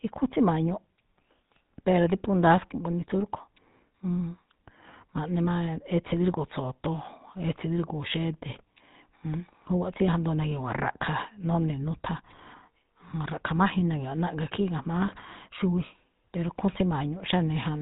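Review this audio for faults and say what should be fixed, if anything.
The whole clip carries GSM full-rate codec damage, and it's plainly audible from start to finish. That old phone codec models the vocal tract and excites it with a regular pulse train sampled coarsely, which is where the buzzy, gravelly edge on this speech comes from. Everything above 4 kHz is gone too, so it sounds dull and boxed-in. The roughness fits a 13 kbps full-rate stream. To prevent it, capture or route the audio over a wideband path rather than a GSM call leg.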